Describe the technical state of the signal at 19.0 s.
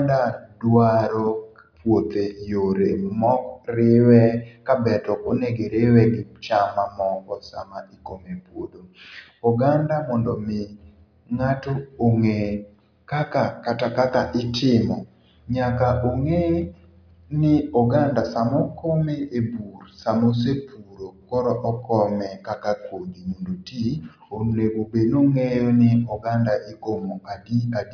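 At 19.0 s the speech signal is intact, with no audible dropout, distortion, or other fault at that moment.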